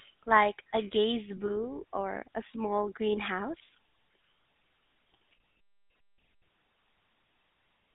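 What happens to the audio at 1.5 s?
At 1.46 to 1.54 s there are lost GSM frames: the decoder got a bad frame and rebuilt it by repeating the last good frame's vocal-tract settings, consistent with a single lost 20 ms frame. The sound briefly holds as a rough, metallic ring.

That moment sits inside GSM full-rate codec coding. The codec models the vocal tract and drives it with sparse, regularly spaced pulses, which fits a 13 kbps rate. The speech has a plainly audible buzzy, gravelly roughness, within a line band of 150 Hz to 3.6 kHz.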